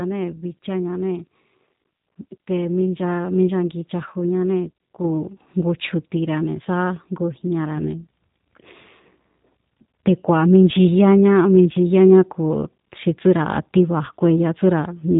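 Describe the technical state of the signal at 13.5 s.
At 13.5 s you're hearing the same G.729 codec damage that runs through the whole clip, and it's plainly audible. The speech is rebuilt from a vocal tract filter, a pitch predictor and a handful of pulses per short frame rather than the actual waveform, so it comes out a bit rough and synthetic. Nothing gets through above about 3.8 kHz, which gives it that boxed-in phone sound. It all fits an 8 kbit/s G.729A stream.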